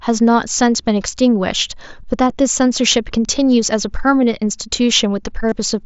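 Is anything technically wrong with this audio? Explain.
Yes. From 5.49 to 5.52 s, near the end, there is concealed Bluetooth headset packet loss lasting about 30 ms, consistent with a short run of about four lost frames. The receiver filled the gap by repeating a best-matching slice of the preceding waveform, giving a brief buzzy tone at full level with a slight warble as real sound resumes. A waveform shows identical repeating cycles; a spectrogram shows evenly spaced flat harmonic bands, all within the mSBC headset codec's roughly 8 kHz ceiling.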